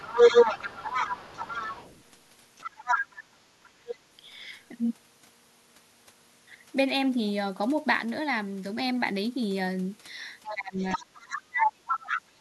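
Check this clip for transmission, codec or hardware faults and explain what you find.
Three kinds of fault are audible in the speech, all tied to echo handling or gain.

Other side's voice leaking through: from 0 to 2.11 s a second voice sits alongside the talker, a little louder than the speech itself, then again from 2.58 to 3.97 s and from 10.43 to 12.21 s at roughly equal level. The far end is likely playing from the talker's loudspeaker back into the microphone, and the echo canceller is leaving much of it in the outgoing signal.

Sudden gain jump: at 8.0 s the whole sound, background included, drops by about 4 dB in a single step and stays there until about 8.7 s, then steps back. With no fade into or out of the change, the level shift is abrupt rather than a natural swell. The likely cause is a digital gain setting being applied instantly instead of through a smooth ramp.

Speech suppressed in double talk: from 10.47 s to the end, while the leaked voice is present, the talker's speech dips and breaks up. 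It is pushed down by around 30 dB at its lowest, and roughly one and a half seconds of it is affected in total. Both sides are talking at once here, and the echo canceller likely cannot separate the talker from the loudspeaker echo, so it attenuates both.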